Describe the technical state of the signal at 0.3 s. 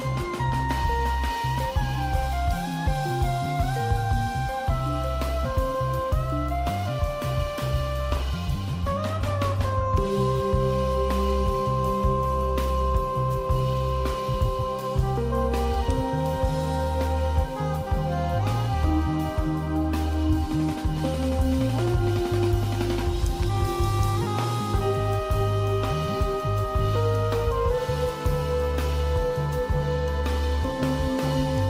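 At 0.3 s the signal is intact, with no audible fault at that point.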